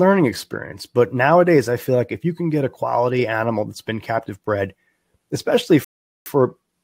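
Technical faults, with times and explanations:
5.84–6.26 s, rebuffering stall: the speech drops to silence for about 0.42 s and then picks up exactly where it left off, because playback exhausted its downloaded audio and waited for more to arrive, adding time without losing any sound.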